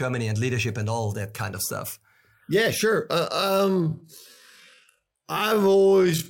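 A time-stretched section runs from 3.3 s to the end of this speech clip, slowed to half speed with pitch held, likely by software repeating short pieces, leaving it dragging.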